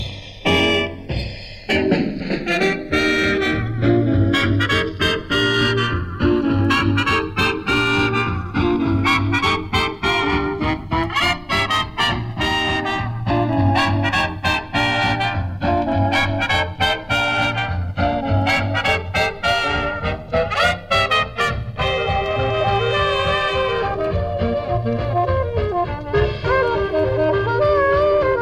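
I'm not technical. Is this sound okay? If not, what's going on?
No, not quite. What you're hearing is the two channels drifting apart. The left and right sides were captured by devices running on slightly different clocks, so one side slowly slips behind the other across the whole clip, ending up about two milliseconds adrift. When the sides get blended together, that growing gap cancels different frequencies in turn, giving a slow, swooshing flanging sound that keeps sweeping as the clip goes on.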